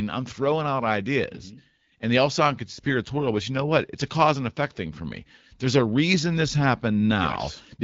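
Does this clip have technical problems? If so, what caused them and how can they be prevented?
No, there is nothing to fix or prevent: the speech has gone through an AMR wideband (HD Voice) codec at 12.65 kbit/s, a rate at which that codec keeps speech clear, and its light coding causes no fault.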